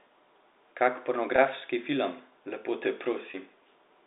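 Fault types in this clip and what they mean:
Packet loss with pitch repetition: at 1.36 s and 3.31 s, 20 ms and 30 ms of speech are lost and patched by repeating the last pitch period, so each gap sounds like a brief, buzzy held tone rather than a silent click or dropout.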